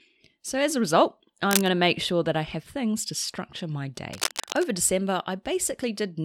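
At 1.51 to 1.68 s a dense, uneven scratching rides over the speech at about its own level, and from 4.13 to 4.69 s a longer, slightly quieter rustle returns. Both bursts are cable scratch noise, likely from a worn cable or connector being moved.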